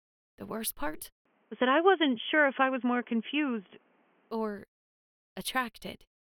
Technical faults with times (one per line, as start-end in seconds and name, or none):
1.25-4.31 input switched to a poorer device